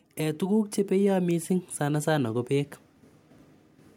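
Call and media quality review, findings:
Automatic gain rising, 0.17–2.78 s: voice and background noise floor swell together, about 7 dB over roughly 2.6 s. Probable component: capture-side AGC. Input read as too quiet, so gain was ramped up gradually rather than stepped.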